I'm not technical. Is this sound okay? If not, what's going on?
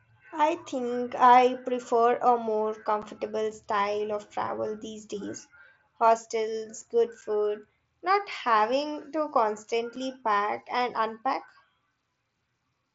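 No. The speech has unconcealed Bluetooth headset packet loss: a tiny chunk of audio travelling from the headset to the phone went missing, and nothing filled the gap. Each leaves a sudden hole, about 7.5 ms long, that can sound like a click. This happens at 3.02 s, between "I prefer a more" and "style of travel these", at 7.21 s, and at 9.96 s, just before "pack and unpack".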